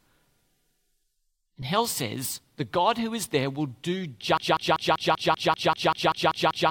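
At 4.37 s the speech locks into a broken-record loop: a fragment of about 194 ms repeats back to back, twelve times, through to the end of the clip. The likely cause is a stalled player or stream resending its last buffer, so the intervening audio is lost.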